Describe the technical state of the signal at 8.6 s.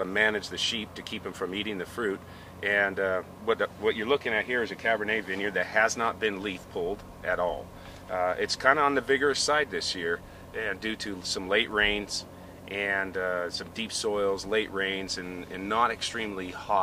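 At 8.6 s the signal is intact, with no audible fault at that moment.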